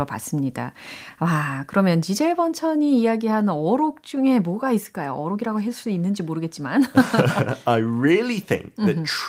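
Speech recording with no technical faults heard.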